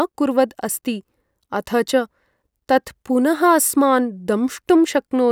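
Speech recording. No technical faults can be heard at any point in it.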